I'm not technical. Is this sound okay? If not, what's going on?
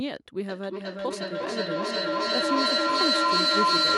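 No, it isn't. From about 0.49 s to the end there's a feedback echo between two devices: the sound keeps coming back a little under every half second, thinner and tinnier each time, and the repeats build up until they're louder than the original speech.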